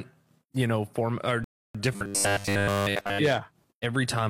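The player ran dry of downloaded audio at 1.44 s, just after "you know form or", and waited for more data before continuing. This rebuffering stall drops the speech into silence until 1.75 s, then picks it up exactly where it paused, so nothing is missing but about 0.3 s of dead air is inserted into the flow of the sentence.

From 1.96 s to 3.19 s, new audio most likely arrived too seldom, and the playback software covered the gaps by looping the most recent fragment while the real speech was skipped. This robotic sound from repeated short buffers imposes a steady 100 Hz buzz, which fits a fragment about 10 ms long repeated over and over. Throughout that stretch, essentially all of the speech is replaced by the rigid, metallic drone.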